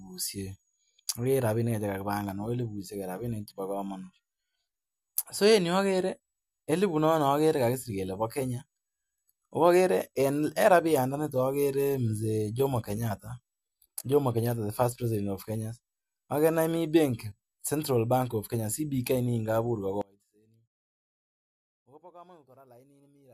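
At 20.01 s the speech drops out abruptly and stays lost to the end, leaving only a faint trace around 30 dB below normal level. This is an audio dropout to a faint residue, likely a break in the signal path ahead of a still-live stage. Unlike a pause or fade, the cut is instant and the gap is never truly silent.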